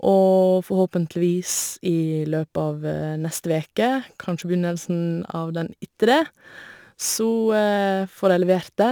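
From start to finish the speech carries a crude rate conversion fault, heard as a gritty, inharmonic fizz riding on louder and brighter syllables. The pattern fits a conversion from 44.1 kHz to 48 kHz done by simply repeating the nearest sample, with no filtering, so the error sits only around 25 dB below the speech. A spectrogram shows inharmonic shifted copies of the speech across the upper bands, and a zoomed waveform shows periodic flat steps.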